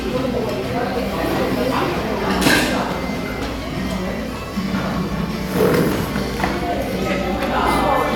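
No technical faults can be heard anywhere in this recording of sounds. Nothing in it calls for a timestamp or a note of any defect.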